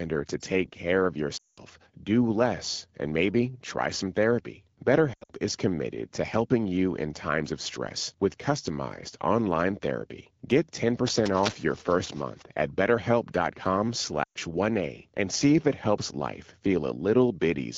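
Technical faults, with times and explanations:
1.37 to 1.59 s, 5.13 to 5.32 s and 14.24 to 14.38 s, lost AMR speech frames: right after "take care of" about 200 ms goes missing. The decoder stretches the last good pitch and vocal tract settings, and the sound smears and drops out fast, as wideband AMR does. After "maybe try some therapy" it's 140 ms of gaps scattered over 160 ms, longest 80 ms. The 120 ms hole near 14.24 s smears the same way, with rough recovery each time.
11.06 to 12.42 s, cable scratch noise: a dense, uneven rustle sits over the speech for just over a second, at roughly 10 dB below it. The irregular crackly texture is the giveaway, likely a worn cable, connector or control being moved so its contact resistance jumps around. The 12.65 kbit/s HD Voice band keeps the speech clear, with only light coding damage.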